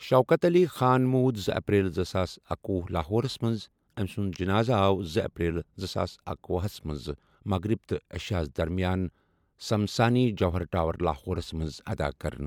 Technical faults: none

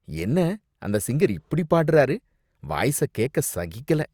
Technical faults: none

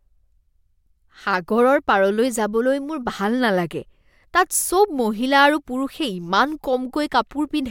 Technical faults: none

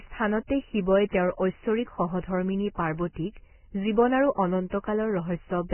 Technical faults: Vorbis compression; pre-echo

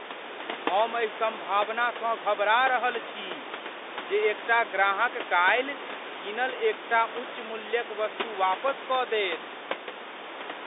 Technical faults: none

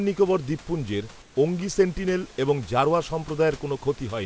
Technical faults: comfort noise in place of the background

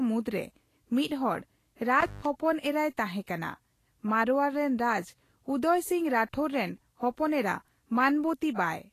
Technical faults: Vorbis compression; intermittent contact; pre-echo

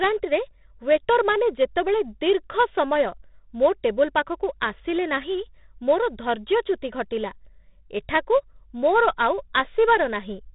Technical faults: 4-bit ADPCM compression

